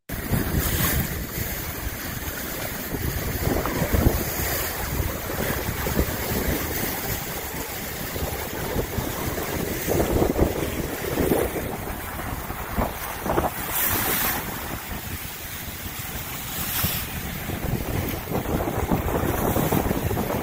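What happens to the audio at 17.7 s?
Nothing goes wrong at 17.7 s; the audio plays through that moment intact, with no dropout, click, distortion or other fault.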